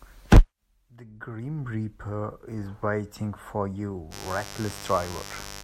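Mains buzz enters at 4.10 s and runs to the end at 5.64 s: sharp switching spikes on a 50 Hz supply leak in twice per cycle, spreading harmonics well into the kilohertz range. This gives a steady, raspy buzz sitting somewhat below the speech.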